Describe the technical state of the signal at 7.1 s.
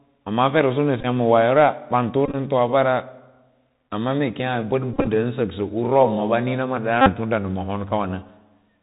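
At 7.1 s you're right at the tail of a Bluetooth headset packet repeat that runs from about 7.01 to 7.11 s. Packets dropped between headset and phone, and the chip kept replaying the last good packet's bits, roughly 49 ms of missing audio, which fits a dozen or so lost packets. Each replay comes round every 3.75 ms, so you get a steady buzz near 267 Hz until clean packets return.

Underneath that, the whole clip is going through the Bluetooth CVSD headset codec, the narrowband one-bit-per-sample scheme running at 64 kHz. Everything above 4 kHz is gone, s sounds come out scratchy, loud high bits distort where the step size can't keep up, and there's a granular hiss sitting under the speech.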